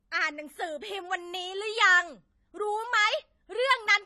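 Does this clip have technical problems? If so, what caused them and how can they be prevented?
Yes. Throughout, the speech likely passed through AAC compression at a low bitrate, one that fits about 32 kbps. The encoder discarded detail it judged inaudible, so nothing remains above 13.8 kHz and the sound is plainly dull and smeared, with a warbling texture. Encoding at a higher bitrate, or keeping an uncompressed master, prevents this.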